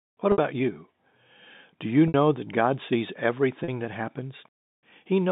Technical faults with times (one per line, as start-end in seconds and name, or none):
0.32-0.38 packet loss with pitch repetition
2.08-2.14 packet loss with pitch repetition
3.64-3.68 packet loss with pitch repetition